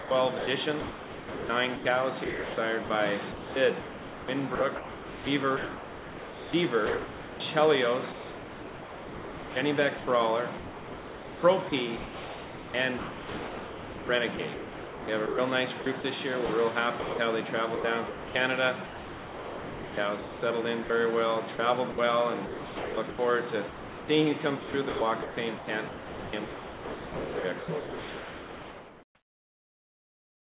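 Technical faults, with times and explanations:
0.00–29.03 s, sound chopped by the voice detector: the audio cuts in and out, with about 15.5 s swapped for synthetic noise. The likely cause is a sender voice detector repeatedly stopping transmission and filling the silences with comfort noise.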